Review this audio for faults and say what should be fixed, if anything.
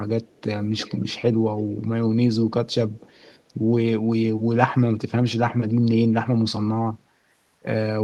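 A delayed copy of the speech comes back in three scraps, at 0.25 to 0.42 s, 0.77 to 1.21 s and 2.92 to 3.42 s. Each trails the original by 277 ms. The first is very faint, the second clearly audible, the third faint. This is an echo leak. The far end likely plays the call on a loudspeaker, and its echo canceller let some of the mic pickup return. To prevent it, the far end should use a headset or retune its echo canceller.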